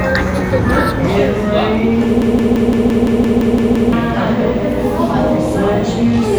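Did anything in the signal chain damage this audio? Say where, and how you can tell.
Yes. From 2.22 s to 3.93 s the sound turns into a machine-gun stutter: one 171 ms fragment repeats exactly ten times, about 5.9 times per second, and then normal audio resumes with about one and a half seconds of material missing. This is a system hang loop at the driver or buffer stage. The host froze while the audio hardware kept replaying its ring buffer. The loop length fits an 8192-sample buffer.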